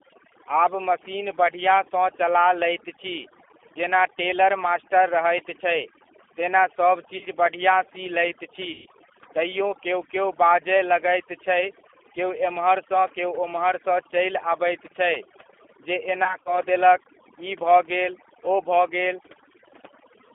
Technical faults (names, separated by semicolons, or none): overdone noise removal; G.729 codec; VoIP packet loss concealed by the speech codec